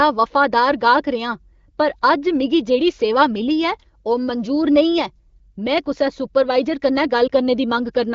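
At 7.27 to 7.31 s, near the end, there is a single lost AMR speech frame: a brief dip or warble lasting about 20 ms. Radio errors corrupted one frame, so the decoder repeated the previous pitch and vocal tract settings at reduced gain. Unlike a hard dropout or digital mute, there is no click or true silence, just a smeared, softened blip before speech resumes. The surrounding wideband audio sounds clean, consistent with AMR-WB at a fairly high rate.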